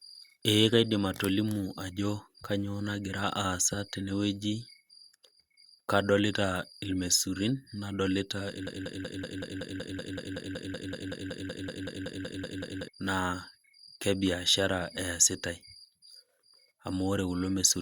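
A broken-record loop runs from 8.67 to 12.88 s, just after "kadolita irmaisurin nadolita": a 0.19 s slice of speech repeats exactly, back to back, 22 times. The player or stream likely stalled, resending its last fragment, so the speech due there is lost.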